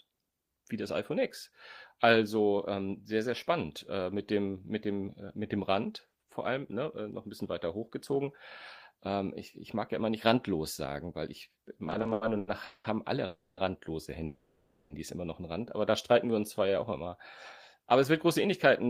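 From 11.87 to 12.86 s, right after "randlos sagen weil ich", the speech shows repeated stalls (stutter). Eleven short gaps, the longest 190 ms, are bridged by stretching the last sound, about 430 ms in total. Nothing is lost, so this is not dropout. The late packets simply keep draining the jitter buffer, and the flow hitches again and again.

Two call audio freezes follow. At 13.26 s, after "haben alle", the sound hangs as a fading continuation for 310 ms, ending in 80 ms of silence. At 14.25 s, after "haben alle randlose", a 650 ms hold fades without going silent, then resumes with "immer noch einen". Each is a single long hold, not a string of hitches, and the likely cause is packets delayed in transit.

From 16.13 to 17.10 s a jitter buffer slow-down plays the speech at about 91% speed, adding 91 ms. Pitch stays unchanged while sounds are drawn out, so it differs from a tape-like slowdown. 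No gap opens either, which sets it apart from a freeze.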